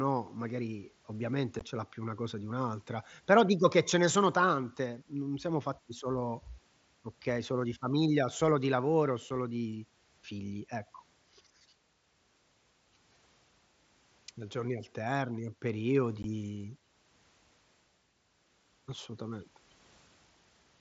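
Unconcealed Bluetooth headset packet loss leaves abrupt holes at 1.59 s after "magari ovviamente" (15 ms), 9.30 s before "di figli ecco" (7.5 ms), and 16.23 s (15 ms).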